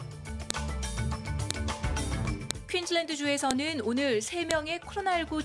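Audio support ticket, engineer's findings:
Sharp loud click at 0.50, 1.51, 2.51, 3.51 and 4.51 s, regularly spaced at 1.0 s. Probable cause: file header played as audio. Each 1.0 s WAV piece is joined with its header intact, so those bytes play as samples. Waveform: brief spikes. Spectrogram: thin full-band vertical lines.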